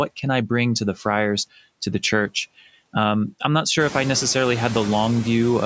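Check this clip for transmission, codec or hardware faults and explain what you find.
Two processing faults are present. Both come from the noise suppressor in the call's microphone chain, which also band-limits the audio to nothing above 8 kHz.

Noise suppressor artifacts run through the whole clip. The suppressor estimates the steady background in each frequency band and pulls those bands down frame by frame, here by about 21 dB. The gating tracks the speech, so the background drops away in pauses and returns beneath each phrase. The effect is clearest after about 4 s, when the room noise rises by about 13 dB and the suppressor works harder.

Speech cut by the noise suppressor occurs from 0.96 s to 1.05 s, right after "I bring to the". For about a tenth of a second, the suppressor mistook low-level speech energy for background. It turned that energy down along with the noise, by about 9 dB at the deepest point. 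That portion sounds swallowed and faint, as if the speech briefly dipped away.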